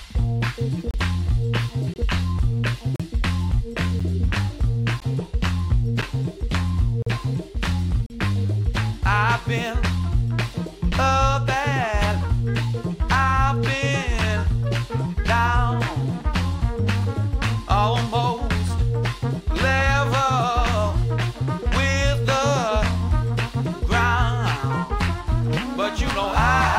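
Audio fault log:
0.91–0.94, 1.94–1.96, 2.96–3.00, 4.00, 5.00, 6.02, 7.02–7.07 and 8.06–8.10 s: gap between stream segments. Hard-edged silences of about 9 to 41 ms recur roughly once per second, matching 1-second segment boundaries that don't quite meet. Unlike a dropout, nothing is missing. The sound resumes exactly where it stopped, just pushed later.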